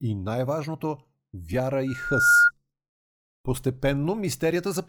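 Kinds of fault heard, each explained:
Loudspeaker feedback squeal: from 1.87 to 2.51 s, a 1.4 kHz tone swells up within about half a second to roughly 10 dB above the speech, because the microphone is picking up its own loudspeaker and the loop gain at that frequency exceeds one.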